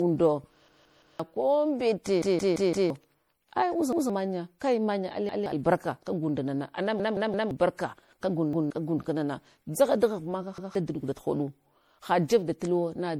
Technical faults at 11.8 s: generation loss

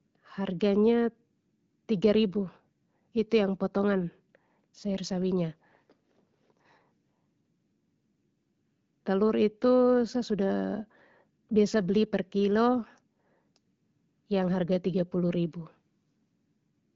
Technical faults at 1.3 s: none

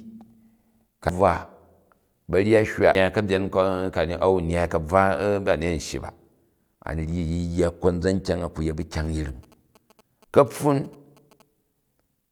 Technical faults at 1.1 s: damaged data in a compressed stream

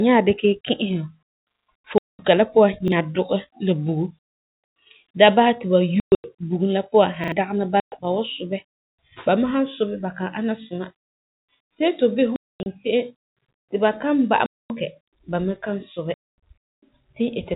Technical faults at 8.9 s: none

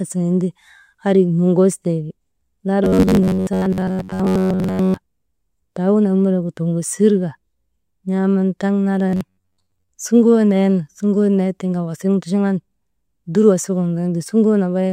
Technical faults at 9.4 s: robotic sound from repeated short buffers

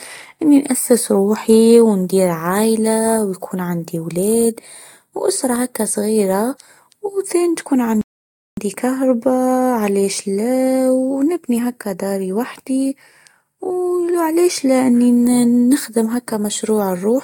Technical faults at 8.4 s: rebuffering stall

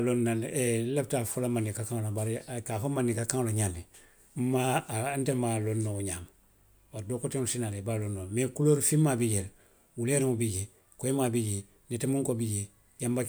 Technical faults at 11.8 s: none

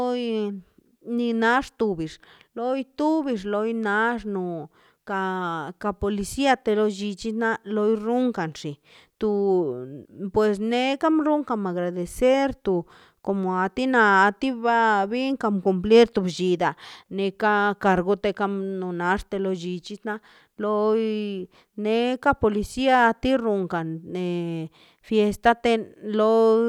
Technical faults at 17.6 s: none

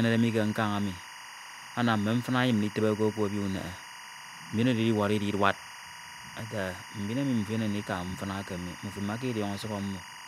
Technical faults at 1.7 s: timecode bleed

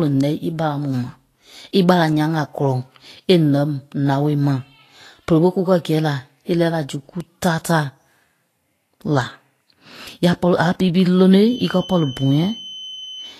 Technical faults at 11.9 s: Vorbis compression; feedback whistle

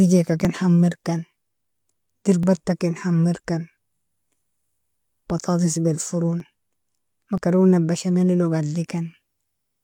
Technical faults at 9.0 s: none

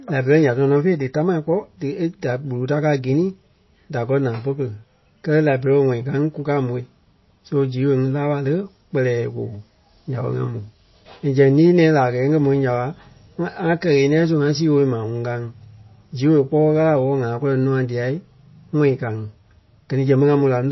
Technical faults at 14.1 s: MP3 compression

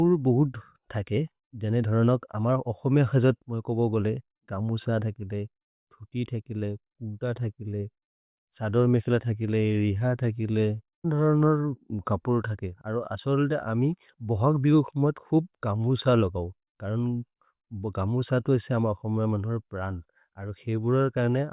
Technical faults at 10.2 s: none

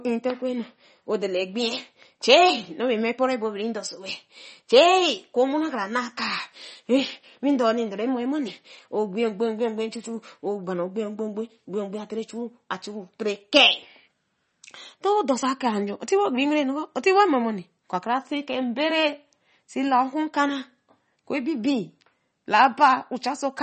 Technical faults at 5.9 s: MP3 compression

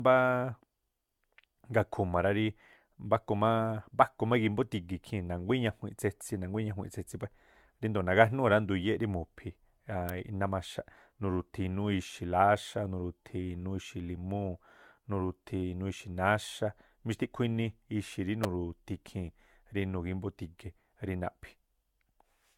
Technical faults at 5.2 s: generation loss

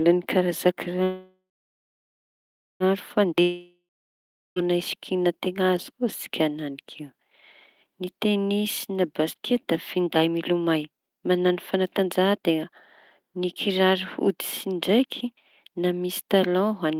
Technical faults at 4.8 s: jitter buffer slow-down

